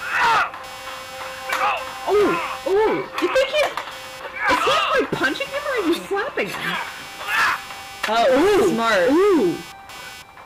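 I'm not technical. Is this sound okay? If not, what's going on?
No. Computer activity noise runs through the whole clip: a buzz of roughly 300 pulses per second, sitting below the main sound, caused by the computer's electrical load leaking into the audio wiring.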